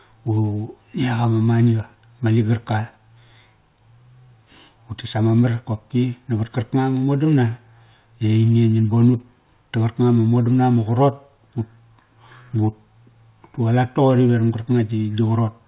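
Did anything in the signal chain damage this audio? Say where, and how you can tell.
No, nothing in the chain has damaged this speech; it just carries the ordinary telephone band of G.711 mu-law coding at 8,000 samples a second, which stops everything above 4 kHz and leaves the faint level-following hiss that comes with that format.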